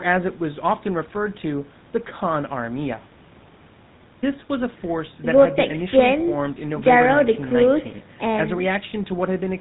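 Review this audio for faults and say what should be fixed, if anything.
The GSM full-rate codec damage runs through the whole speech clip: a buzzy, gravelly roughness with nothing above 4 kHz, consistent with a 13 kbps stream. Its pulse-driven vocal-tract model discards most excitation detail, so voicing turns harsh. Room noise sits about 23 dB below the speech. To prevent it, route the call over a wideband codec such as AMR-WB or Opus instead of GSM full rate.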